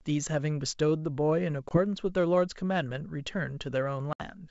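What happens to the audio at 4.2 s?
At 4.13 to 4.21 s there is packet loss on an ADPCM call: about 70 ms of the G.722 stream vanishes as a hard-edged silence. Unlike a plain dropout, the audio resumes with brief distortion while the decoder's predictor resynchronises.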